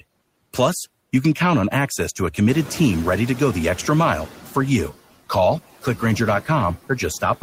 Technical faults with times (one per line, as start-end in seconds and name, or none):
0.00-7.42 noise suppressor artifacts
2.48-4.28 noise suppressor catching up